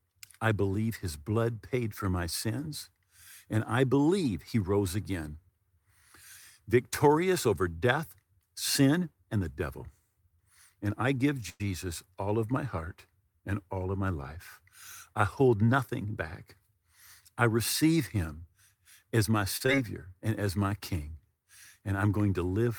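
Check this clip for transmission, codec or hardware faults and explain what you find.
Four transmission faults are audible in this speech, all of the kind a call's receiver makes when packets arrive late or not at all.

From 11.49 to 11.62 s, just after "I give" and before "all of my heart", the sound hangs and smears into a fading buzz with a brief silence of about 10 ms, then resumes where it stopped. This is a call audio freeze, likely from delayed packets draining the jitter buffer. About 103 ms was filled in, nothing was lost, and the delay grew by 103 ms.

From 15.14 to 16.06 s the speech sounds hurried but keeps its pitch, running at 108% speed. This is a jitter buffer speed-up: with too much audio queued, the receiver cut many short pitch-period slices, around 70 ms in total, to bring the delay back down.

From 19.57 to 19.62 s, after "as my" and before "and as my", a sound is held too long. 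This is a short stall from a late packet. The receiver stretched the last sound by 36 ms until the packet came, so nothing is missing.

From 19.66 to 19.70 s, in the same stretch, there is a quick smear or wobble. This is short concealed packet loss: 20 ms of audio never arrived, and the receiver patched the hole with 15 ms continued from the preceding sound before blending back in.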